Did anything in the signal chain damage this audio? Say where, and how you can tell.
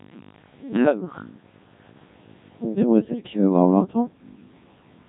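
Yes, and it's at the codec stage: the whole clip has been through a Codec 2 vocoder, and it's heavy damage from start to finish. The speech comes out robotic and buzzy, with that synthetic, sine-wave quality where the natural texture of the voice is gone. That's because the coder never kept the waveform. It sent only pitch, voicing, energy and a rough spectral envelope, and the decoder rebuilt the voice from those. The degree of mangling fits one of its low-rate modes, around 1.6 kbit/s.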